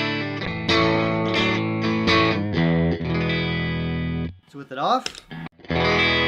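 From 0.47 to 1.59 s, a call bitrate drop: the encoder starved of bits, consistent with about 64 falling to 16 kbps, leaves the sound coarse and muffled.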